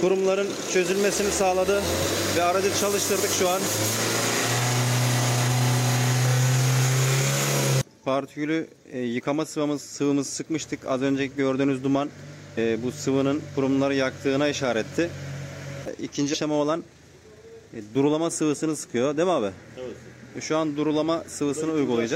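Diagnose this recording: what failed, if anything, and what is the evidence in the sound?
The failure is at the codec or storage stage: compressed frames skipped. At 12.57 s, 16.33 to 16.35 s and 17.94 s the audio jumps forward instead of playing through. The first jump loses about a tenth of a second, the second about 150 ms, and the third only around 15 ms. That fits a handful of whole frames missing from the file or rejected by the decoder.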